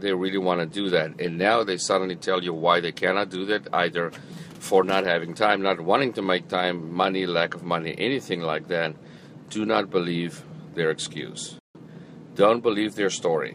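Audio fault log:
11.59–11.75 s, playback stall: The player likely ran short of data or had its output thread held up, so nothing reached the output for 157 ms. The sound breaks off into silence mid-flow, then resumes once playback recovers.
11.75–12.05 s, time-compressed catch-up: To clear the backlog built up during the stall, the player cut out small slices and cross-faded the remainder, running at 1.5 times normal speed. For these 0.3 s the audio sounds hurried, at unchanged pitch.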